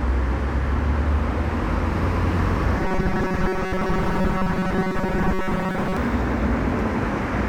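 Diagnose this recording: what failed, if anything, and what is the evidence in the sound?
Robotic sound from repeated short buffers, 2.78 to 5.97 s. A rigid 188 Hz buzz follows the sound only roughly. Likely a starved buffer looping about 5 ms chunks, repeating most of the audio.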